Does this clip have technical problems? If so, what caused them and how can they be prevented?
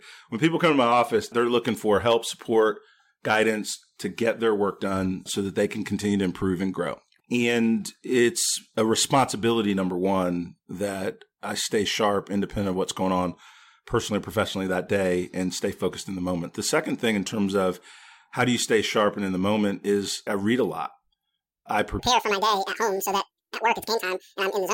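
Yes. From 21.99 s to the end at 24.74 s, the audio was read two samples at a time (double speed): the reader treated each pair of samples as one frame, as if the data were stereo or twice as wide. The speech therefore plays at 2x speed, an octave higher. Prevent it by checking that the declared channel count and sample format match the actual stream before decoding.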